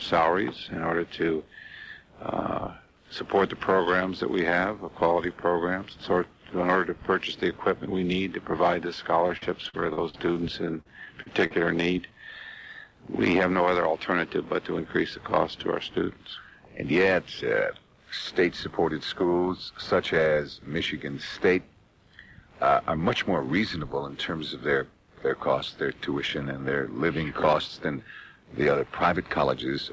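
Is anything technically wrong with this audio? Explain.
Yes. There are two bursts of repeated packet loss (robotic sound), from 9.28 to 10.39 s and again from 10.81 to 11.53 s. Packets kept going missing or arriving too late, and each hole was covered by stretching the preceding sound forward before the next hole arrived. In each stretch nearly a fifth of the time is patched, with gaps up to 43 ms, so the sound turns choppy, with small pieces dropped. Across the clip, content stops at 8 kHz, which fits a G.722 call codec.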